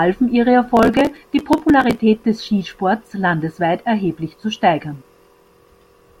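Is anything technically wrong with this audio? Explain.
Yes. Processor overload crackle, 0.77 to 2.0 s: the processor misses dozens of very short buffer deadlines, each skipped outright, so the speech tears into gritty crackle.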